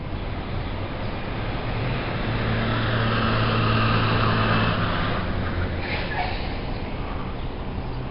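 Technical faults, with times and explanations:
Throughout: 4-bit ADPCM compression. Coarse 4-bit steps leave heavy gritty hiss on loud moments and smeared attacks, and nothing above 5.3 kHz, consistent with about 44 kbps.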